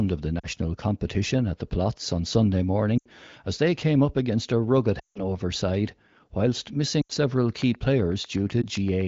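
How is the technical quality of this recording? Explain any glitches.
The recording has two kinds of fault over light wideband coding: repeated dropouts from lost AMR speech frames, and a regular train of clicks near the end.

Lost AMR speech frames: at 0.39–0.48 s after "of the", 2.98–3.08 s before "as they came up", 4.99–5.26 s, 7.02–7.12 s after "side whilst", and 8.61–8.65 s. Corrupted frames were concealed by repeating the last good parameters with falling gain. The short gaps dip toward silence briefly. The 160 ms gap near 5 s drops to near silence before recovering.

Train of clicks: from 7.50 to 9.02 s there are roughly 15 evenly spaced ticks at about 7.9 per second, peaking near speech level. The likely cause is interference or a faulty connection or power supply.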